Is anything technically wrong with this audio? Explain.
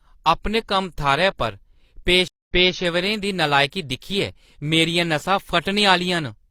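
Yes. From 2.28 to 2.76 s there is a stream reconnect. The connection dropped and a fresh decoder restarted, so 192 ms of silence gives way to audio resuming 279 ms earlier, repeating material before "दी नलायकी दिक्खियै".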